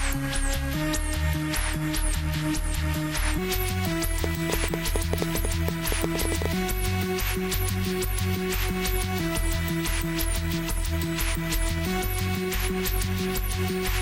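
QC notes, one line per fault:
0.00–3.38 s, section at the wrong speed: the opening runs at 0.829 times its proper speed, so everything in it sounds slower and deeper, roughly three semitones low, with pitch and tempo dropping together. At 3.38 s the sound snaps back to normal speed and pitch. This is likely a playback or editing stage running this segment against the wrong clock rate, which stretches it in time.
4.24–6.47 s, train of clicks: around twenty sharp, similar-shaped clicks ride over the sound at about 8.1 per second, with uneven spacing between them. They peak around 15 dB above the surrounding material, so they stand out clearly as popping and are audible in the quieter moments as well. The likely source is electrical interference from nearby equipment or a faulty connection or power supply, injecting repeated pulses into the signal path.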